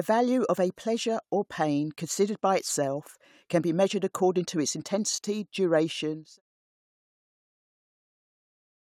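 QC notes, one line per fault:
No faults found in the speech. A smooth fade-out begins at about 6 s and reaches silence at 6.42 s, gradual and with no click or hard edge.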